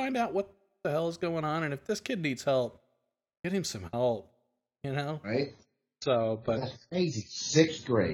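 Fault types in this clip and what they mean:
Adaptive stream at a lower bitrate: From 5.44 s, right after "some help you know", the speech abruptly turns dull and swirly with no gap, losing everything above 7.1 kHz until the end. The player switched to a lower-bitrate version, consistent with AAC dropping from 96 to 16 kbit/s.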